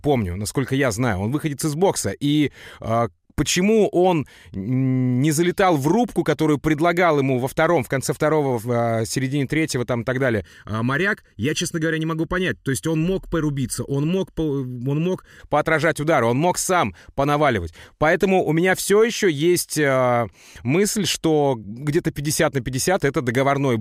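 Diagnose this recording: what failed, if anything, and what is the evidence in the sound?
Channel delay (comb filtering) in the driver or buffer stage, 10.41 to 15.40 s: speech turns hollow as one channel lags by about 0.7 ms before mono summing. Spectrograms show fixed dark horizontal notches from around 700 Hz upward, evenly repeating; the waveform keeps its envelope.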